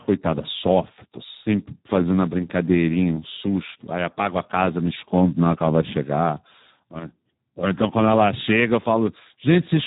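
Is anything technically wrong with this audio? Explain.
Yes. The speech has been through the Speex codec, and the damage runs through the whole clip. Speex models the voice as a filter driven by a coded excitation signal. At this low setting there are too few bits for that excitation, and the sound fits a rate of about 8 kbps. So the speech comes out noisy and hoarse. Nothing is heard above 3.8 kHz, which leaves it narrow and muffled.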